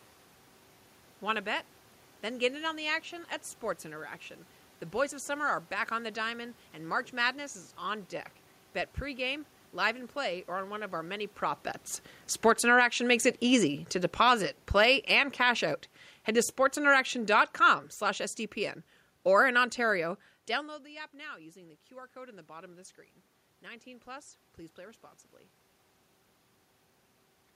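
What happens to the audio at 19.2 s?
At 19.2 s the level is partway through an automatic gain falling event that runs from 16.28 s to 20.18 s. The gain control judged the input too loud, or its background noise too strong, and pulled its gain down gradually, by about 6 dB across those four seconds. The speech therefore sinks steadily rather than stepping down, and the room noise underneath drops with it. That shared drop is what separates a gain change from a talker moving away.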